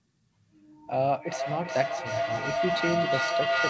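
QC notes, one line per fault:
0.92 s to the end: feedback howl. A tone near 700 Hz swells instead of dying away, repeating about every 400 ms and peaking about 1 dB above the speech. A second device in the room feeds its loudspeaker back into the microphone, and each pass comes back louder. Unlike echo, the repeats grow and narrow to one pitch. Unlike mains hum, the pitch sits far higher.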